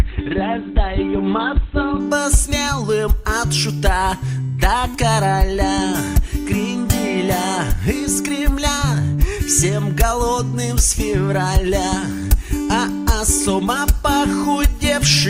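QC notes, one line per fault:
0.0–2.0 s, adaptive stream starting at a low bitrate: the player began on a low-quality version of the stream before switching up, so the opening has nothing above 4.2 kHz and stronger codec artefacts, as from roughly 12 kbit/s Opus, then brightens abruptly without a gap.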